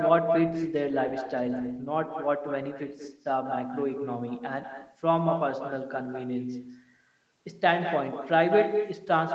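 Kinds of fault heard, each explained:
Echo with no canceller: The far end is playing the call over a loudspeaker, and its microphone captures that playback and returns it with nothing cancelling it out. Every phrase of the speech is followed, about a fifth of a second later, by a second copy sitting only about 7 dB below the original. That copy is thinner, and it runs through the whole clip.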